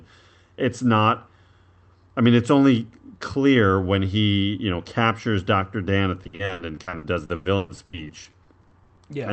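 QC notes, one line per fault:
6.23–8.99 s, repeated packet loss (robotic sound): some two dozen dropouts arrive in quick succession, the longest about 120 ms, adding up to roughly a second. Each hole is papered over by stretching the preceding sound, so about a third of this stretch is synthetic fill. The rapid alternation of real and extended audio gives a choppy, robotic texture with fragments missing, heard over the call codec's 8 kHz band limit.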